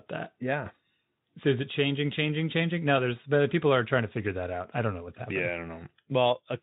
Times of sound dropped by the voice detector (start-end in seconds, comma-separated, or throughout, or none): none